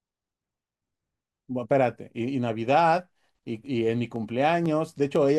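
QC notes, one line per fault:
2.16–5.16 s, periodic USB or driver dropouts: regular ticks every 0.5 s. At each tick a sliver of audio, around half a millisecond, is skipped outright, likely because a recurring background task stalls the USB bus or audio driver at a fixed interval.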